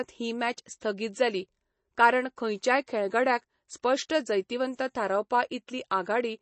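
The whole speech clip sounds dull and watery, with nothing above about 8.3 kHz and a swirling, metallic edge on s sounds. This is likely MP3 compression at a low rate, fitting a 32 kbps encode, where the encoder cuts the treble and drops weak frequency lines frame to frame.

At 0.80 s, between "ही मॅच" and "जाली कारण खंयच्याच खेळगड्याक", and again at 3.82 s and 4.09 s, each shortly before "जैतिवंत थारावपा", a hiss of about 11 to 12 ms arrives just ahead of a sharp onset, softening it. This is pre-echo: coding noise spread across a block fills the quiet moment before the attack.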